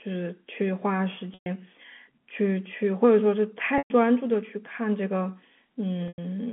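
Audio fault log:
1.34 s, 3.78 s and 6.08 s: packet loss with pitch repetition. Gaps of 120, 120 and 100 ms, consistent with runs of 20 ms packets, were bridged by repeating the last pitch period. Each gap holds a buzzy tone, fades to silence within about 50 ms, then cross-fades back.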